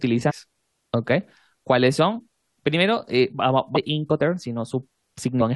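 At 0.29 to 0.32 s and again at 3.75 to 3.77 s the speech is briefly disrupted, the sign of damaged data in a compressed stream: corrupted frames make the decoder misread them and resynchronise.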